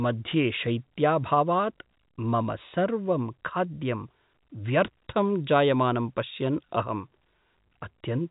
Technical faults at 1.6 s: none

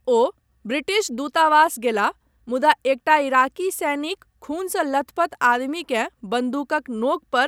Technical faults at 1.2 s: none

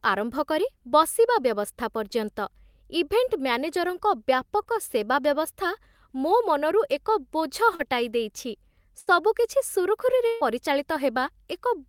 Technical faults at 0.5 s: none

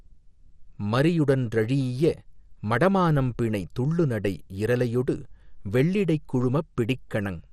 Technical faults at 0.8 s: MP2 compression

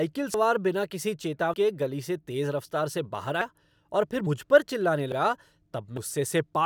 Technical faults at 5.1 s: dropped buffer (overrun)

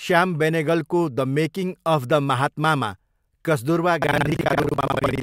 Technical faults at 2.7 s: none

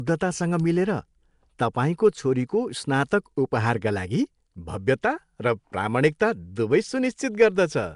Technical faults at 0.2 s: Nellymoser compression

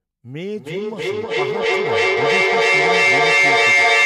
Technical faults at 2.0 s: feedback howl

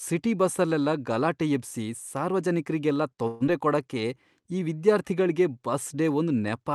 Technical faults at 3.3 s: long network dropout

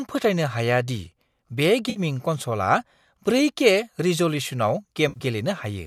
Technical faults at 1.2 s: none

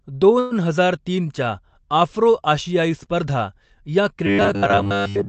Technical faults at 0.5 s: call audio freeze

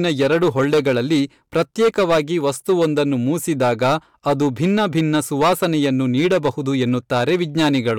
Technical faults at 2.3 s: hard clipping

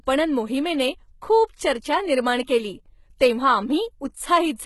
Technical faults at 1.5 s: HE-AAC compression

